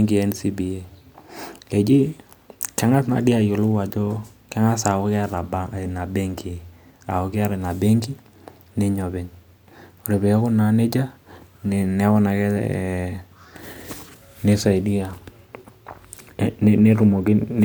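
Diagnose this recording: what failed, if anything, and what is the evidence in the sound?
No fault found in this recording.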